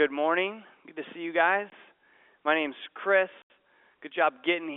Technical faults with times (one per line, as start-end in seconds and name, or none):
1.70-1.72 packet loss filled with silence
3.42-3.50 packet loss filled with silence